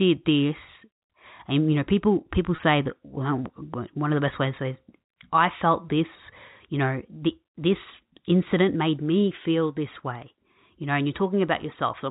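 A speech clip over telephone-band G.711 coding, with packet loss with pitch repetition from 2.56 to 2.58 s, between "you know people people" and "that one". A 20 ms gap filled by a briefly held, buzzy repeat of the last pitch period, not a click or silent dropout.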